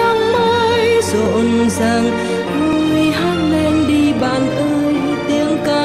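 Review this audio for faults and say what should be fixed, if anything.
Regular clicks recur every 1.46 s from 1.26 to 5.66 s, likely clock drift buffer slips: mismatched device clocks, off by roughly 700 ppm, dropping or repeating a few dozen samples. Lock both devices to one shared clock or resample adaptively.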